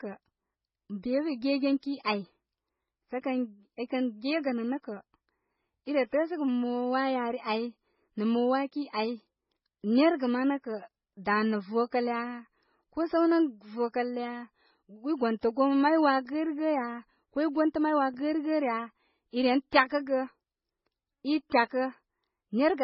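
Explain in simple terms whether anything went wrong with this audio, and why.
Something did go wrong, and it runs through the whole recording: the speech sounds dull and watery. Nothing is heard above about 5.6 kHz, so crisp sounds like s and t are softened. The blurred, swirly texture has two different flavours mixed together, which points to a chain rather than a single squeeze. The likely cause is transcoding between lossy codecs: the speech was heavily compressed once, then compressed again in a different format, with each pass adding its own damage.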